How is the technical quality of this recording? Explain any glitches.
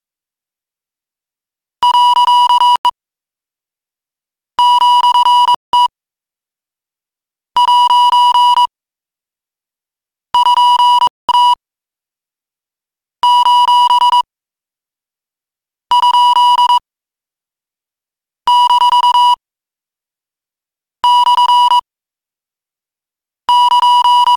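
The recording has three brief gaps, at 2.76 to 2.85 s, 5.55 to 5.73 s and 11.07 to 11.29 s, lasting 91, 187 and 215 ms. Each time, the sound drops to full silence and then resumes. This is a Bluetooth stall: likely interference delayed packets, the receiving buffer emptied, and playback waited for retransmissions. Clean silence between intact edges, rather than crackle or smeared distortion, separates it from a codec glitch.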